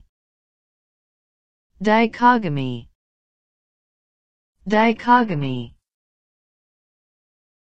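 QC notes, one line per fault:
3.17–7.67 s, adaptive stream at a lower bitrate: the player switched abruptly, with no gap, to a much leaner stream, consistent with a move from AAC near 96 kbit/s to HE-AAC near 12 kbit/s. Coding artefacts rise until the end.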